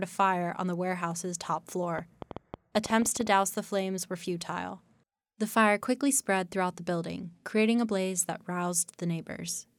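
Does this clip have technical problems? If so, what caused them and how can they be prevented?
Yes: between "on the warehouse's top" and "the flames were futile", 1.99 to 3.28 s, a train of clicks, about fifteen similar pops at an uneven 9.4 per second and well above the speech. Their matching shape distinguishes them from random crackle, and the likely cause is interference or a faulty connection or power supply. Prevent it by keeping cables away from other equipment and using a stable, properly grounded interface.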